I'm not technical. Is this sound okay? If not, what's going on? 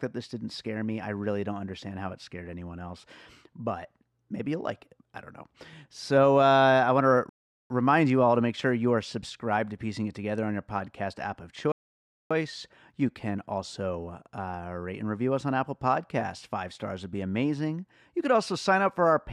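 No. The speech stops dead twice, at 7.29 s for about 0.4 s and at 11.72 s for about 0.6 s. These are rebuffering stalls. The player ran out of downloaded audio and waited for more. Each time it resumes exactly where it stopped. Nothing is missing, but silence is added.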